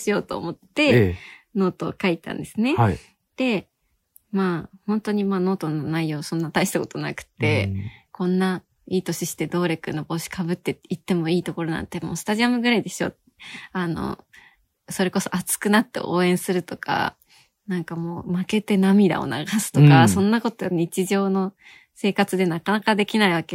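No technical faults can be heard in the speech at any point.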